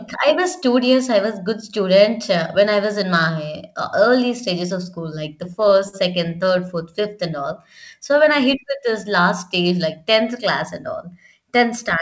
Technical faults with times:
5.44-6.71 repeated stalls (stutter)

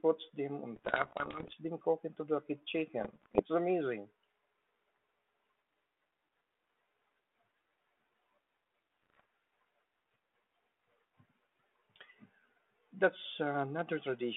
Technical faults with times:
0.76-1.56 bit errors on an ADPCM link
2.99-3.40 bit errors on an ADPCM link
9.03-9.20 bit errors on an ADPCM link

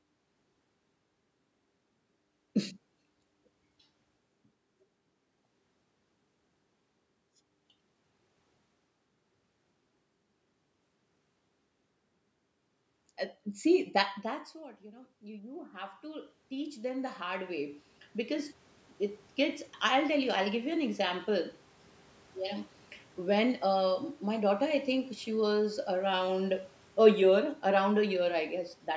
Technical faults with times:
14.21-21.36 automatic gain rising

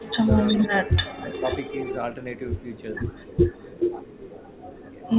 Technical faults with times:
0.00-0.32 speech suppressed in double talk
0.22-1.96 echo leak
0.61-1.23 speech suppressed in double talk
2.36-5.12 echo leak

